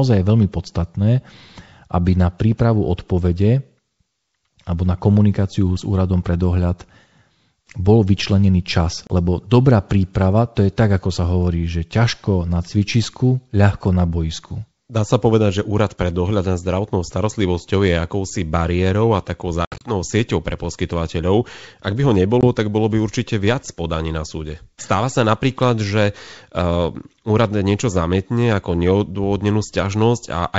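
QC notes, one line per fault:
9.07 to 9.11 s, packet loss on an ADPCM call: about 30 ms drops to silence after "bol vyčlenený čas", then returns slightly distorted while the decoder's predictor resyncs.
19.65 to 19.91 s, packet loss on an ADPCM call: about 120 ms lost in pieces over 160 ms, longest gap 70 ms, after "akousi bariérou a takou". Distortion follows each gap.
22.41 to 22.44 s, packet loss on an ADPCM call: a 20 ms hole after "by ho". The mismatched step size briefly distorts "tak bolo by určite".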